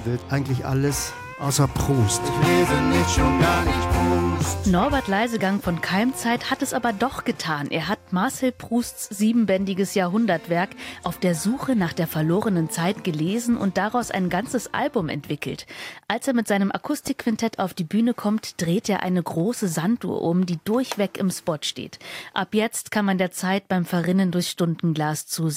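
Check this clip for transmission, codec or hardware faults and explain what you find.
One hardware-type fault is present: a loud pop at 17.07 to 17.23 s. It arrives as two sharp pops in quick succession, peaking a few decibels above the surrounding sound, which continues unbroken underneath. The likely cause is a sudden voltage step or pulse entering the signal path, such as a plug being seated, a switch operating, a static discharge or a driver glitch, with the downstream circuitry shaping that pulse into the double thump heard.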